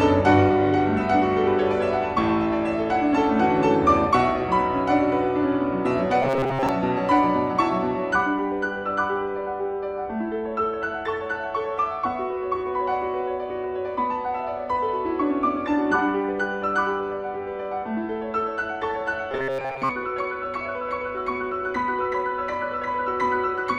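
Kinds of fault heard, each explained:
Robotic sound from repeated short buffers: at 6.22–6.69 s and 19.32–19.92 s the sound turns into a rigid metallic buzz fixed at 134 Hz, likely from a 7.5 ms chunk replayed over most of each stretch. Unlike a dropout, nothing goes silent.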